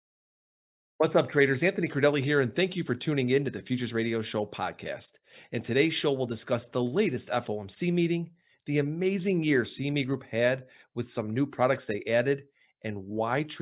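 Speech recording, no audible technical faults anywhere in the clip.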